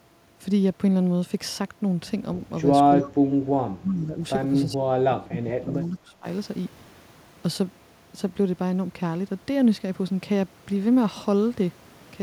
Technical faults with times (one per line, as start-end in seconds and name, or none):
2.97-4.20 speech suppressed in double talk
3.02-3.07 echo leak
4.67-6.26 speech suppressed in double talk